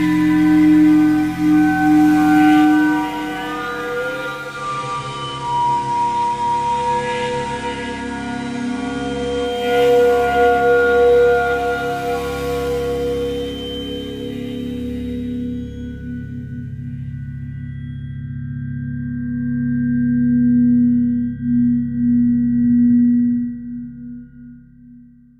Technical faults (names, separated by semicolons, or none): digital radio blending to analogue